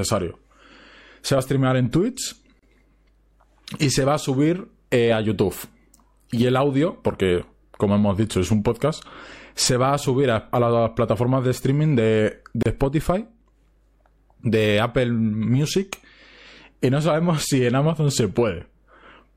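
Speech with a gap at a join of encoded pieces: brief silences at 2.59 s (32 ms) and 12.63 s (31 ms, after "plataformas de streaming de"), 10 s apart, from untrimmed encoder delay and padding. Unlike a dropout, nothing is lost; speech resumes exactly where it stopped.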